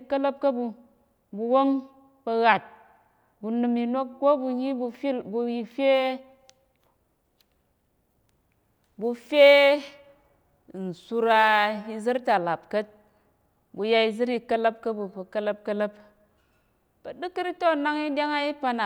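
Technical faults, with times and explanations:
5.95–12.35 s, sample clock jitter: the converter clock wandered by around 2 µs, mistiming samples, so a hiss roughly 35 dB below the speech rides its louder, brighter moments.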